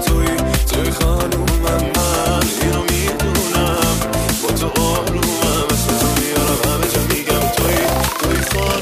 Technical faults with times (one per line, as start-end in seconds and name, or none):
none